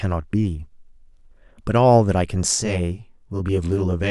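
From 2.55 s to the end, channel delay causes comb filtering. One channel lags by around 20 ms, with notches starting near 20 Hz. The speech turns rough and slightly doubled.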